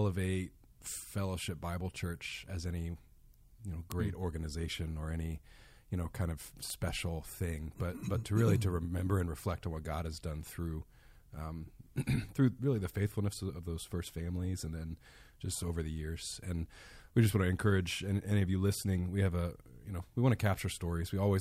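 Word clock ticks run from 0.20 to 20.61 s, roughly once a second: an unlocked receiver's clock drifts against the sender's, slipping one sample per tick.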